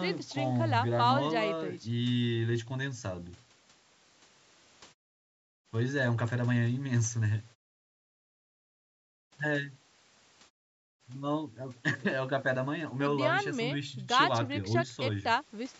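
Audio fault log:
No faults heard anywhere in this speech recording.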